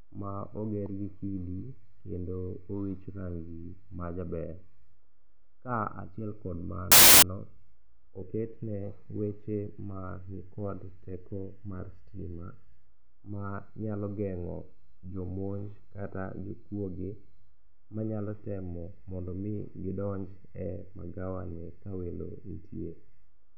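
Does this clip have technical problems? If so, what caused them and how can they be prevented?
Yes. From 6.92 to 7.22 s, file tags were played as audio: an embedded cover picture, stored as compressed data, was read as samples. That turns into a hard-edged burst of very loud white noise cutting across the speech. Preventing it means having the decoder skip tag and picture blocks so only the actual audio stream reaches playback.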